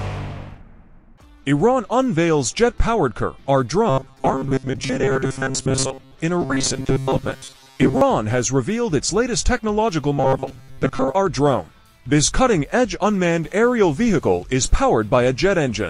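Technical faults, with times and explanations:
3.90–6.16 s, 6.42–8.01 s and 10.18–11.15 s, robotic sound from repeated short buffers: a rigid metallic buzz near 133 Hz. Audio likely arrived too seldom, so roughly 7.5 ms slices were replayed in place of most of the real audio, imposing that fixed pitch.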